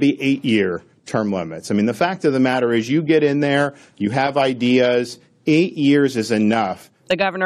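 No technical faults can be heard anywhere in the speech recording. Nothing at any point in the audio needs a timestamp or an explanation.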